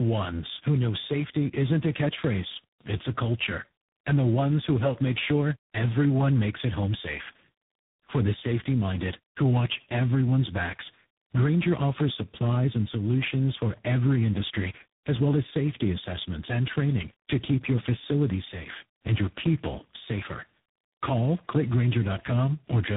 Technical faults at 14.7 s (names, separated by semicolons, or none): tandem speech coding